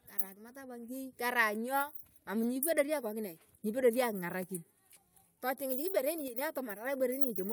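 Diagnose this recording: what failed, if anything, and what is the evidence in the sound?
A sudden gain jump drops the speech and background noise together by about 5 dB from 6.28 to 6.38 s. The waveform envelope steps abruptly with no ramp, and the spectrogram dims uniformly across all frequencies. The likely cause is an unramped digital gain change in processing.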